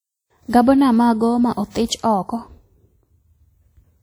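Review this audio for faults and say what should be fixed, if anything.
Throughout the speech, a ringing, washy sound with signal-following hiss is likely WMA compression, fitting around 48 kbps. Spectrograms show long-block noise smeared over tens of milliseconds. Encode from the original source at a higher bitrate, or use a lossless format.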